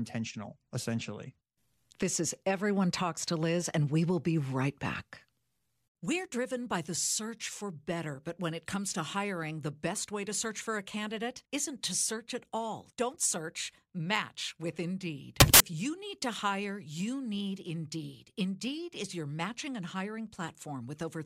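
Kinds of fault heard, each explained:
Samples built from the wrong bytes: for about 0.2 s, from 15.40 to 15.60 s, the speech gives way to a loud burst of harsh broadband noise. That happens when each sample's bytes get stitched together wrongly, off by a byte or in swapped order, so the jittery low bits end up as the big part of every value. The result is harsh hiss.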